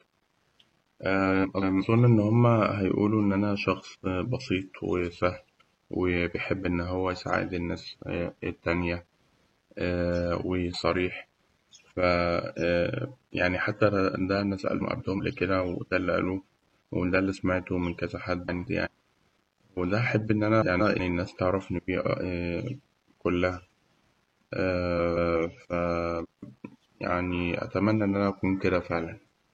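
Frames out of order occur seven times in this speech: at 1.43 to 1.83 s, 14.80 to 15.20 s, 16.47 to 16.76 s, 18.48 to 18.88 s, 20.61 to 21.00 s, 24.97 to 25.37 s and 26.23 to 26.58 s. Each time, two neighbouring runs of frames were swapped and decoded in that order. The later part plays first, then the earlier part. Each run lasts about 0.19 s, which fits four frames per run. It sounds like a garbled flutter. No time is lost.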